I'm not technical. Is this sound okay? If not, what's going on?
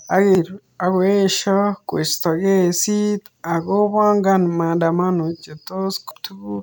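No. Part of the compressed file this speech was stored in got corrupted, which is called damaged data in a compressed stream. When the player reaches the broken bit, it can't read it properly and briefly loses its place while it hunts for the next good piece. You hear that as a short chirp or blip, once at 0.35 s, just before "akoesho koisto kesit ako", and again at 6.11 s.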